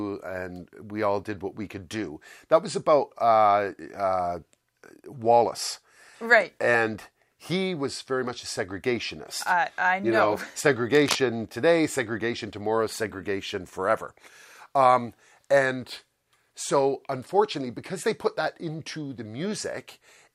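A burst of cable scratch noise runs from 10.93 to 11.19 s, a dense, uneven scratching only a little quieter than the audio beneath it, likely from a worn connector or cable being moved. Unlike a single click, it is a brief rustling cluster.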